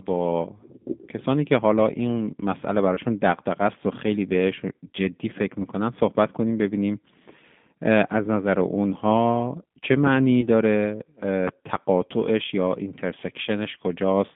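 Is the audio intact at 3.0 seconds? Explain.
No. A single voice packet was dropped between 2.95 and 2.99 s, a gap that fits one 20 ms packet, and the decoder covered it with VoIP packet loss concealment, repeating its last pitch and vocal-tract filter at falling gain. Because each decoded frame depends on the one before, the rebuilt speech remains weakened or distorted for tens of milliseconds after real packets resume, so at 3.0 s the sound is still recovering from that patch.

Throughout the clip, including at 3.0 s, the speech passes through the G.729 codec (the G.729A variant) at 8 kbit/s. It rebuilds each 10 ms frame from a filter, a pitch predictor and a few pulses, and the line carries only about 150 Hz to 3.6 kHz. The coding damage is plainly audible: the voice sounds thin, slightly rough and synthetic, with nothing in the upper range.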